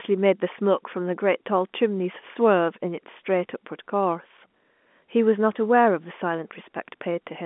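Nothing stood out on listening to this telephone-band speech, which carries nothing above about 3.8 kHz as the G.711 A-law line coding would lead one to expect.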